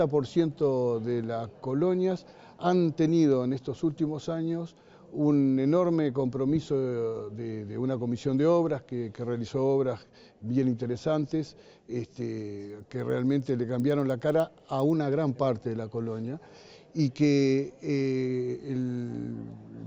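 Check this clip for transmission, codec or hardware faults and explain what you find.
One fault shows up, between 12.6 and 14.9 s: the resampler restarted on every block. The rate converter, probably going from 16 kHz up to 48 kHz, treated each block as standalone, missing the real neighbouring samples at each edge, so every boundary carries a small error. Here the result is a regular ticking at 10 per second, which fits 100 ms blocks, heard over the sound and gone during pauses.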